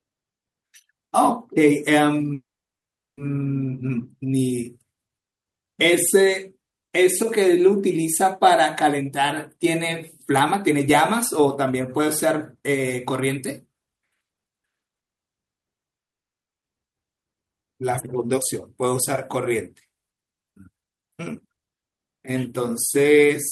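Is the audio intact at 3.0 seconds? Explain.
No, a call audio freeze runs from 2.33 to 3.19 s, likely from the jitter buffer running dry: a brief fading buzz, then about 0.75 s of silence that shows as a flat waveform and blank spectrogram. Nothing is lost; the sound resumes 0.84 s late.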